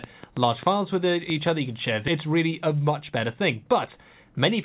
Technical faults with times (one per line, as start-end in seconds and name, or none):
0.04-1.48 train of clicks
2.08-2.10 skip ahead
2.18-4.01 jitter buffer speed-up